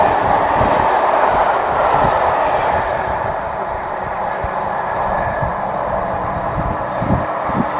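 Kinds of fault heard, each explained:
No technical faults can be heard anywhere in the signal, which has no interruptions or added disturbances.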